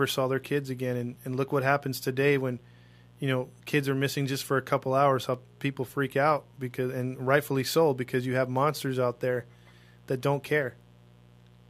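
A steady, raspy mains buzz runs throughout this speech, about 30 dB below it: 60 Hz switching spikes whose harmonics draw evenly spaced horizontal lines across the spectrogram.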